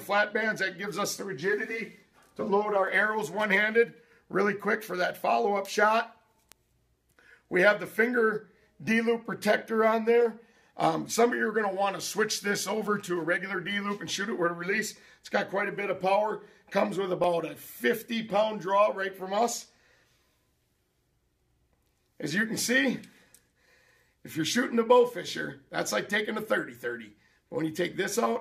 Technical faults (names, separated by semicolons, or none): bit error spike